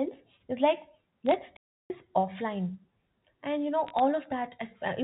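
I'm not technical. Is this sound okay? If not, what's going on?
No. There are two kinds of problem in this speech recording.

The first is bit errors on a digital phone line, in two short bursts: 1.26 to 1.34 s and 3.87 to 4.00 s. In each, you hear sharp ticks and a brief crackle sitting on top of the speech, which itself is unchanged. A phone line carries sound as a stream of ones and zeros. Here a small fraction of them arrived flipped, and each flipped digit spoils a single instant of sound; when it hits an important digit, that comes out as a click.

The second is a playback stall from 1.56 to 1.90 s. The sound simply drops out for about a third of a second in mid-flow and then carries on. The likely cause is that the player ran short of incoming audio, or was briefly held up, and had nothing to output until it caught up. The telephone-style sound of the recording, narrow and a little thin, is simply how standard phone lines carry audio.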